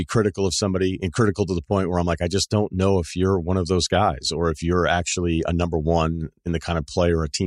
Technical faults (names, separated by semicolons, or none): none